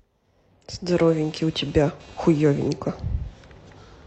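From 0.91 s to the end of the clip there is computer activity noise: a buzzing, chirping texture pulsing at roughly 300 Hz, around 25 dB below the speech. Processor, graphics or mouse load is modulating the audio circuit's shared ground, so the noise follows machine activity, not the speech.

At 2.14 to 2.19 s, compressed frames are skipped. The decoder never played roughly 50 ms of encoded audio, so the speech jumps forward.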